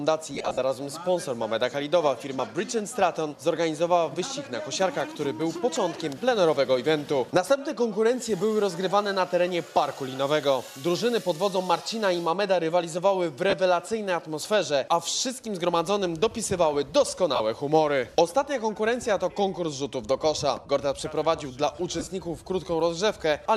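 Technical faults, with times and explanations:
0.35–0.59 s, 13.50–13.53 s, 17.35–17.40 s, 21.99–22.07 s: lost LE Audio frames. The decoder repeats the last spectrum with scrambled signs, so tones become a noisy smear. On a spectrogram, harmonics blur into flat broadband patches. The first gap totals 165 ms over 240 ms, with runs up to about 40 ms.
2.39 s: dropped buffer (overrun). About 20 ms of audio is skipped with no silence between, giving a jump in the sound. The likely cause is samples overwritten before being read. The waveform shows a sharp discontinuity.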